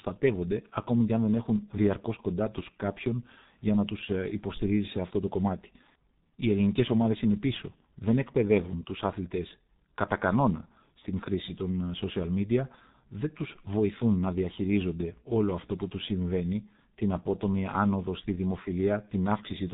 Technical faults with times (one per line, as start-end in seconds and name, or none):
0.00-19.73 G.723.1 codec